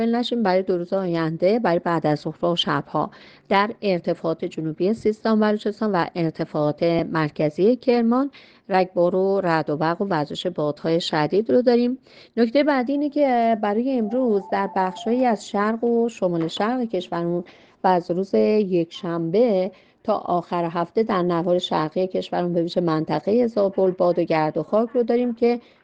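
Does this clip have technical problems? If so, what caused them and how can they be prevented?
Yes. Lost LE Audio frames at 6.99 s leave a brief noisy smear, consistent with one 7.5 ms frame concealed by repeating the previous spectrum with randomised signs. Prevent it with a stronger Bluetooth link: shorter distance, less 2.4 GHz interference, or more retransmissions.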